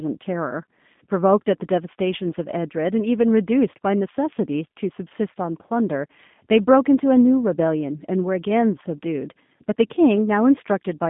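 From start to finish, the speech carries G.729 codec damage, and it is plainly audible. The band is narrow, about 150 Hz to 3.6 kHz, and nothing sounds above 3.7 kHz. The codec rebuilds each short frame from a vocal tract model, a pitch predictor and a few pulses. Much of the fine detail is lost. The result sounds rough and slightly synthetic. This fits an 8 kbit/s G.729A stream.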